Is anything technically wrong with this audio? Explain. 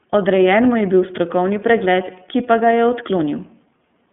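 Yes. The whole clip carries iLBC codec damage, and it is plainly audible. The speech is confined to a telephone band of roughly 150 Hz to 3.5 kHz, with nothing at all above 3.7 kHz, so sibilants lose their edge and the sound is muffled. iLBC codes the excitation of each frame on its own, and the slightly rough, synthetic texture fits 30 ms frames at the 13.33 kbps mode.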